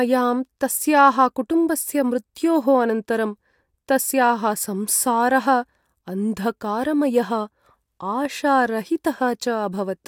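Listening to the recording of speech, nothing stood out as a technical fault at any point.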